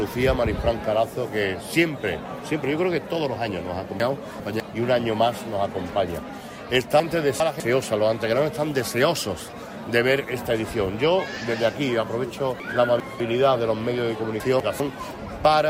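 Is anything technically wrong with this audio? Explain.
Yes. At 4.0–4.6, 7.0–7.6, 12.6–13.2 and 14.4–14.8 s the sound briefly jumbles. These are chunks out of order: a 200 ms chunk plays two chunks late (one late at 14.4 s), leaving hard joins but nothing lost.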